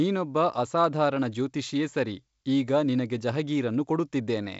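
Nothing's wrong with this speech recording: it comes through a G.722 wideband telephone link at 56 kbit/s, with the top end stopping around 7.7 kHz as that coding does, and there's no technical problem to point at.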